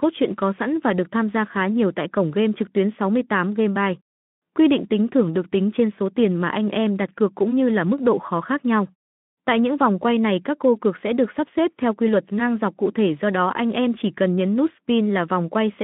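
No faults: the speech passes through the Speex path as intended, confined to a telephone-style band of roughly 150 Hz to 3.5 kHz and carrying only the light coding texture expected of that codec.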